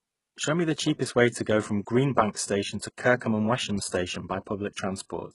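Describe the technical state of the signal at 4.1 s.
At 4.1 s the speech has a gritty, metallic top end: s sounds come out lispy, and nothing reaches above about 11.1 kHz. This is heavy HE-AAC compression damage, present throughout the clip. The likely cause is that only the lower spectrum was coded and the treble was rebuilt by copying lower bands upward under a coarse envelope, which fits a very low bitrate of around 12 kbps. The harmonics therefore fail to line up across the crossover.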